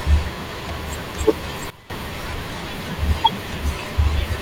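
A speech recording with one sudden gain jump. At 1.70 s the level drops abruptly by about 16 dB. Speech and background noise fall together. The drop holds until 1.90 s, then the level snaps back. Neither change is ramped, so each is a step between two adjacent samples. The likely cause is a digital gain setting applied instantly, such as a bit shift in the signal path. That would account for the hard edges at both ends.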